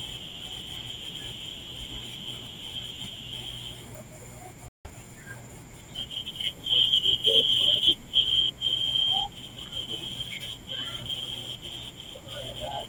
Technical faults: stream reconnect

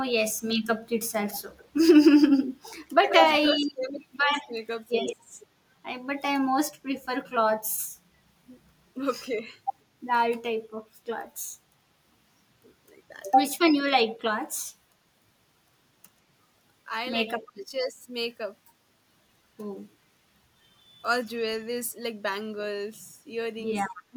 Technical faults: echo leak; speech suppressed in double talk

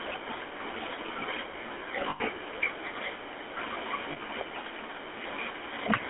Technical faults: GSM full-rate codec; lost GSM frames

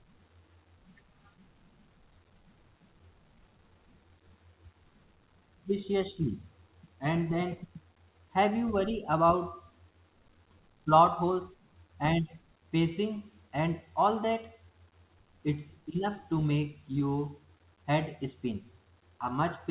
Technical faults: none

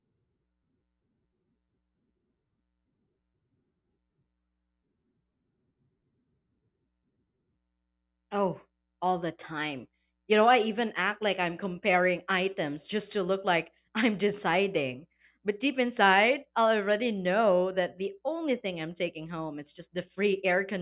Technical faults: none

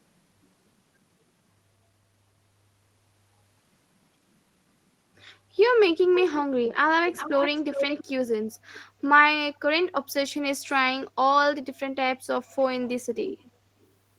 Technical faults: echo leak

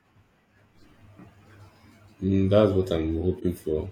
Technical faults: corrupt frame decoded

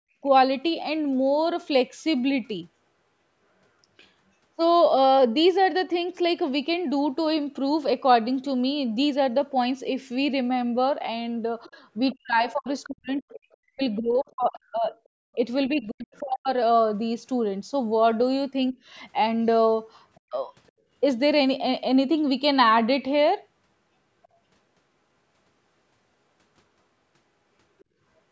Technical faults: other side's voice leaking through; speech suppressed in double talk

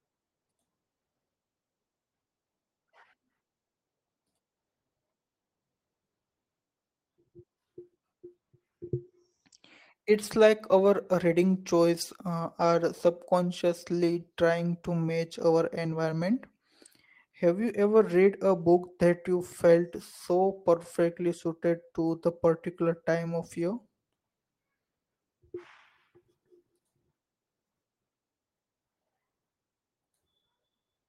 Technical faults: none

